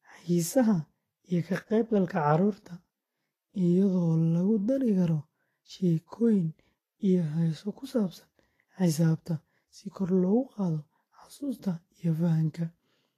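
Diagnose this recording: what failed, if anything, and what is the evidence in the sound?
The codec stage likely applied Vorbis compression throughout, discarding everything above 14.2 kHz and coarsely quantising the treble, so the speech sounds hissy and grainy.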